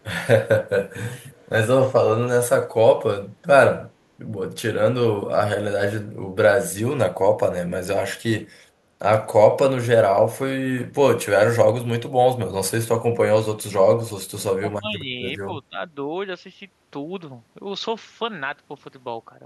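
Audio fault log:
1.31 to 1.49 s, echo leak: a faint delayed copy of the speech slips back about 248 ms behind the original, sitting around 35 dB down, so it's just a ghostly scrap. Likely a loudspeaker on the far end whose echo canceller didn't fully scrub what its mic picked up.
14.58 to 15.11 s and 15.69 to 15.77 s, speech suppressed in double talk: the speech ducks hard, roughly 20 dB at worst in the first stretch and about 15 dB in the brief second one. Likely the echo canceller couldn't tell the talker from the echo while both sides overlapped.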